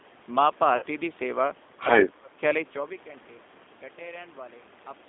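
Speech carried over a call line with plainly audible G.729 codec damage throughout: the band is squeezed to roughly 250 Hz to 3.6 kHz, and the voice takes on a slightly rough, synthetic grain from being rebuilt at 8 kbit/s from a vocal tract filter, a pitch predictor and sparse pulses, unlike the smoother dullness of simple low-pass filtering. From 0.77 to 0.85 s, VoIP packet loss concealed by the speech codec briefly stretches the voice into a buzzy tone or coloured noise that fades. About 50 ms is missing, which fits roughly five lost 10 ms frames, and the sound stays weak for a moment after packets resume, unlike the silent gap or hard click of a plain dropout.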